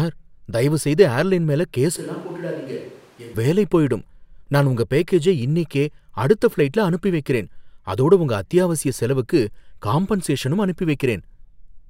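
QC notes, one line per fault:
1.99–3.33 s, switch to a distant microphone: the speech abruptly turns hollow and roomy, thinner in the bass and roughly 10 dB quieter, with room noise only about 25 dB below it, then snaps back just as suddenly. This likely comes from the close microphone dropping out and a farther one filling in. On the waveform the envelope steps down and smears; the spectrogram shows weakened low bands, reverberant tails and a raised noise floor between syllables.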